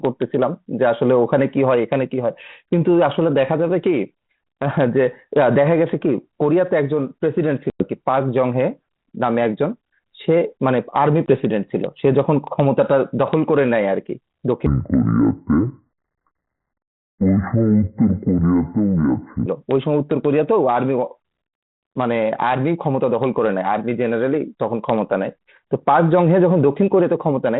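Speech over a G.726 ADPCM line at 32 kbit/s, whose light coding grain can be heard throughout, is broken by two sharp-edged dropouts, at 7.70 to 7.89 s and 11.26 to 11.28 s. These are packet loss on an ADPCM call: about 100 ms, or around five packets, then 20 ms vanish into silence. The decoder's predictor and step size fall out of step, so the speech comes back briefly slightly distorted before settling. From 14.66 to 19.46 s the section plays at the wrong speed, 0.556 times normal, slow and deep, roughly ten semitones low. This is likely a playback or edit clock mismatch, which drags pitch and tempo down together.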